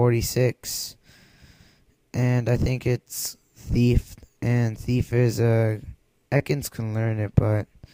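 At 0.83 s and again at 2.57 s there is a sudden jump forward in the sound. This is likely a dropped buffer (overrun): samples were overwritten before being read, cutting out roughly a hundredth of a second at 0.83 s and a few hundredths at 2.57 s, with the surrounding audio spliced together with no silence between.

From 6.37 to 6.42 s the sound briefly smears and wobbles. This is short concealed packet loss: 20 ms of audio never arrived in time, so the receiver extended the preceding sound to fill 22 ms and then faded back into the real signal.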